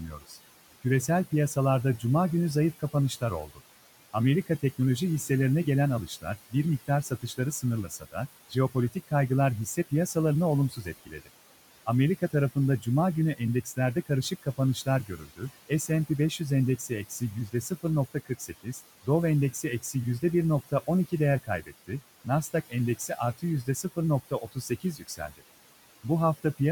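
Noise suppressor artifacts run through the whole clip: the suppressor pulls down the bands it judges to be steady noise by about 17 dB, so the room noise, sitting about 17 dB below the speech, drops away between words and comes back underneath them.

Speech cut by the noise suppressor happens at 0.11 to 0.85 s, 2.79 to 3.61 s, 6.07 to 9.12 s, 10.7 to 11.3 s and 11.86 to 25.43 s. Quiet parts of the speech are mistaken for noise and turned down by up to about 15 to 17 dB, so they sound swallowed. Across the spans this adds up to roughly a fifth of a second, a fifth of a second, half a second, three tenths of a second and about two seconds.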